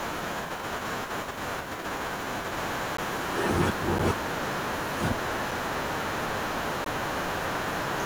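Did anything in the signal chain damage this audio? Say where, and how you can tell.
Yes, three blocks of digital silence at 2.97, 3.99 and 6.84 s (14, 9, 17 ms) point to buffer underruns. Silent blocks with abrupt edges, not faded or concealed network gaps.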